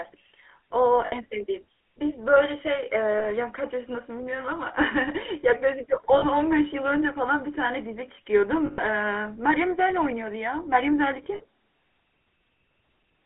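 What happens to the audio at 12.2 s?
At 12.2 s the speech sounds buzzy and gravelly, with a boxy, telephone-like narrowness: nothing sits below about 300 Hz or above 3.4 kHz. This is GSM full-rate codec damage, present from start to finish rather than only at this moment. The codec rebuilds the vocal tract from a compact model and drives it with a coarse, regularly spaced pulse excitation, discarding much of the fine waveform detail, which fits a 13 kbps full-rate stream. That thin, synthetic excitation causes the plainly audible rasp.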